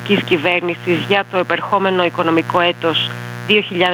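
From start to finish, mains buzz rides under the sound. Interference from something like a dimmer, rectifier or unshielded cable is getting into the signal path, putting sharp spikes at twice the 60 Hz mains rate, with harmonics stacked well up into the kilohertz range. The result is a constant, rasping buzz, not a smooth hum, sitting roughly 20 dB below the wanted signal.

Gain pumping runs throughout as well. The likely cause is input gain set far too hot for the microphone, with a fast limiter or compressor clamping down whenever something loud arrives. The level swings by something like 15 dB. Loud and soft passages end up pressed close together, giving a squashed sound.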